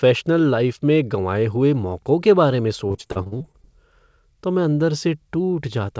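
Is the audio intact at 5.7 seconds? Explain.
Yes, the audio is intact at 5.7 seconds, with no dropout, glitch or distortion at that moment, only the steady band limit near 8 kHz that fits a wideband call codec such as G.722.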